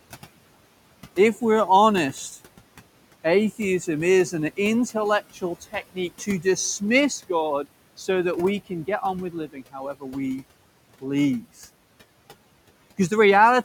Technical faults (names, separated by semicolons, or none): noise suppressor artifacts; speech cut by the noise suppressor